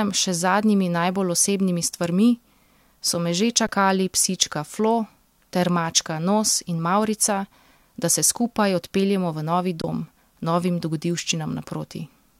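Twice the output buffer ran empty and the converter held its last sample value until data returned, an underrun with held sample. At 3.67 s the stall lasts about 17 ms. From 9.82 to 9.84 s it lasts about 23 ms, which fits a missed 1024-sample buffer, just before "dom novim". Each time the speech freezes into a brief flat stretch and stops with little click. Around 20 ms of live audio is lost.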